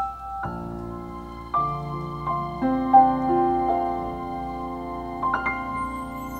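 Nothing here calls for a fix; the sound holds steady all the way, with nothing to point to.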